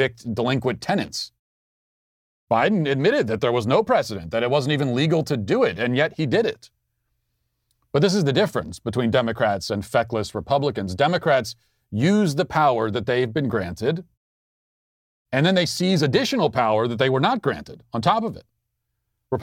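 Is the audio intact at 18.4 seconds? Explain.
Yes, at 18.4 seconds the speech plays through intact, with no dropout, click, distortion or other fault.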